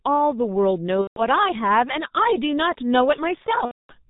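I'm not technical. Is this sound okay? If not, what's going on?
No. The whole clip has gone through the G.723.1 codec, an old internet-phone compressor that throws away the higher frequencies and squeezes the speech hard. That's why everything sounds muffled and a bit hoarse, with the crisp edges of consonants smeared.

On top of that there are two spots of VoIP packet loss concealed by the speech codec, at about 1.01 to 1.23 s and 3.65 to 3.94 s. Chunks of the call went missing, and the decoder filled each gap by stretching the last bit of speech into a buzzy tone or a coloured noise that fades. The second gap is longer.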